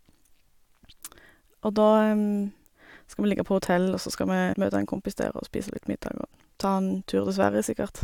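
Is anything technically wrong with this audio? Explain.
Yes. At 4.52 to 4.54 s the speech jumps abruptly forward with a small blip, landing on "møte en kompis der". This is most likely a stream segment skipped: one segment failed to load and playback resumed with the next. Unlike a dropout, there is no silent gap; the missing material is simply gone.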